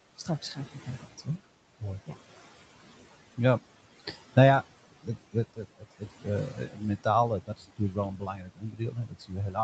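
Throughout the clip, the noise suppressor pulls the room noise down by about 16 dB frame by frame, so the background dips in the gaps and swells back under the speech. These are noise suppressor artifacts.

From 0.18 to 1.27 s, the suppressor mistakes parts of the speech for noise and turns them down by up to about 13 dB, over roughly a third of a second in total. Soft sounds and syllable tails come out faint and swallowed.

The same speech cut by the noise suppressor returns from 5.03 to 7.06 s, deeper this time at up to about 17 dB over about half a second, and again from 7.46 s to the end, also reaching about 17 dB, where quiet stretches sound clipped away.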